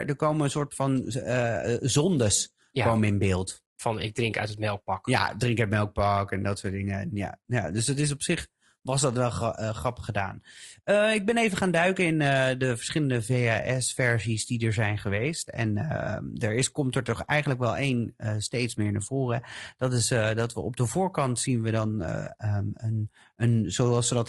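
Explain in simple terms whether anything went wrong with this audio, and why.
The speech sounds rough and grainy from start to finish. There is a hiss-like fuzz sitting between the tones of the voice. The top end sounds thin and a little artificial. The likely cause is low-delay AAC compression, the kind used on video calls. It squeezes the sound in very short slices so it can travel quickly. With too little data to spare, the detail turns to grit.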